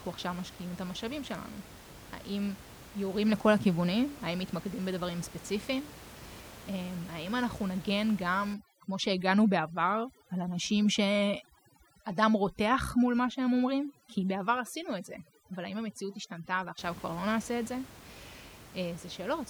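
From 8.54 to 16.79 s, overdone noise removal takes hold. The reduction is set too hard, so bands near the noise estimate are cut away. Room noise, about 19 dB below the speech, drops and breaks up into twinkling specks. Quiet parts of the speech vanish.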